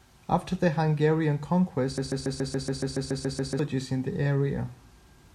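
From 1.98 to 3.59 s the speech sticks: a 141 ms fragment repeats exactly, back to back, eleven times, a stuttering broken-record loop. The likely cause is a stalled player or stream resending its last buffered piece, so the speech meant for that span is lost.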